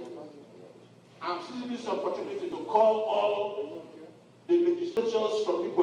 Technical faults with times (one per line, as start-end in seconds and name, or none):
2.52 dropped buffer (overrun)
3.75 dropped buffer (overrun)
4.97 dropped buffer (overrun)